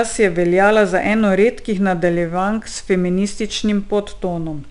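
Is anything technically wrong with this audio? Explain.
Yes. The speech carries 4-bit ADPCM compression throughout, and the damage is plainly audible. Each sample is stored as a coarse 4-bit step from a prediction, with the step size adapting as it goes, so the error is a gritty hiss that rises and falls with the voice and roughens sharp onsets. The content stops at 10.6 kHz, which fits a stream of about 89 kbps. A spectrogram shows level-tracking noise filling gaps between harmonics and a hard ceiling at 10.6 kHz.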